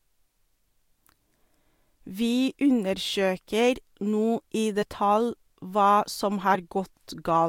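At 4.81 to 4.83 s and again at 6.54 s, compressed frames are skipped. About 20 ms of speech is lost each time, so the speech jumps ahead.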